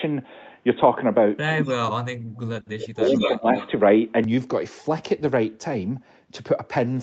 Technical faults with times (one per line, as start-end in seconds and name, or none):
0.00-4.24 input switched to a poorer device
1.54-2.39 speech suppressed in double talk
1.65-1.73 echo leak
2.74-3.54 speech suppressed in double talk
3.06-3.68 echo leak